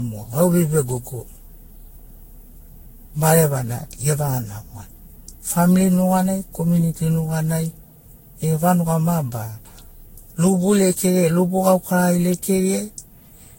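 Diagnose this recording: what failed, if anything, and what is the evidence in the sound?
Codec: generation loss, likely from about fifteen lossy re-encodes near 60 kbit/s. Throughout, speech is swirly, hollow and smeared, attacks blur, and nothing exceeds 16.6 kHz.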